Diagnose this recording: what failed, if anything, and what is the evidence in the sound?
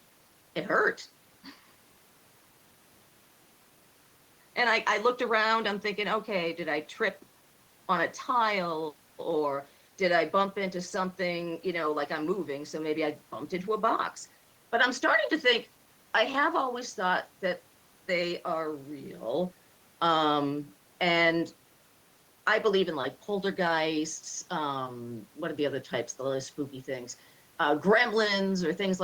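Nothing failed here: I can't hear anything wrong anywhere along the chain in this speech recording, so there's nothing to diagnose.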